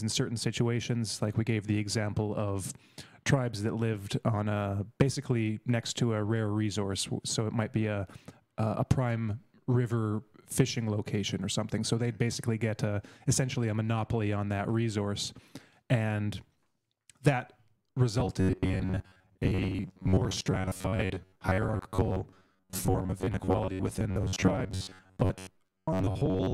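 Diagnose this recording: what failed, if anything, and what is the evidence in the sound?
From 18.2 s to 26.5 s the sound becomes a rigid, metallic buzz pitched near 93.8 Hz: robotic sound from repeated short buffers. The likely cause is a starved driver or buffer stage looping chunks of about 10.7 ms, so roughly half the audio is repeats rather than new material.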